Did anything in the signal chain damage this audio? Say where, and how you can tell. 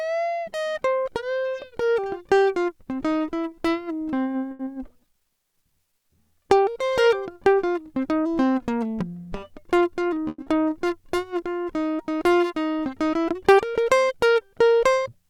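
Yes, the damage is at the network and jitter-buffer stage of a call.

Short stall from a late packet, 4.51 to 4.61 s. The music hangs on one sound for about 80 ms, with a faint buzzy sustain, then carries on from exactly where it stopped. Nothing is skipped. A packet arrived late, the jitter buffer ran dry, and the receiver stretched the last sound to cover the wait. That added 80 ms of delay.

Short concealed packet loss, 4.65 to 4.68 s and 10.42 to 10.48 s. Each is a brief smear or wobble where real audio vanishes: 40 ms is lost in the first and 80 ms in the second. The receiver patched the holes with 10 ms and 40 ms of synthesized continuation before blending back. Because more was dropped than filled, the music jumps slightly forward, and the buffer delay shrinks by a few tens of milliseconds each time.

Jitter buffer speed-up, 9.56 to 10.18 s. Over this stretch the music plays at about 114% speed while its pitch stays the same, so the tempo rushes audibly. 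The buffer was holding more audio than its target. To bring the delay down, the receiver cut out short pitch-period slices again and again, removing roughly a tenth of a second in total.

Call audio freeze, 10.28 to 10.40 s. The music stops and is replaced by a fading buzz lasting about 100 ms, which ends in roughly 10 ms of silence. It then resumes from the same point, with nothing missing. The likely cause is packets held up in transit emptying the jitter buffer, with the receiver extending the last sound until they arrived. This inserted 100 ms of delay.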